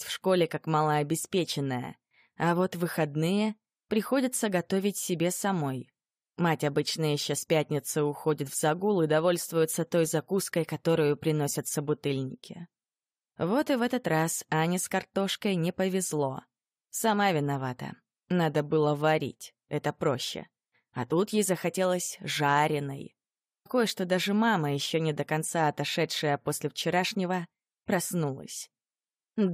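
At 23.65 to 23.67 s the sound jumps abruptly forward, with a brief blip at the join. Material is missing across the cut. This is likely a stream segment skipped: one chunk of the stream failed to load, and playback continued from the next.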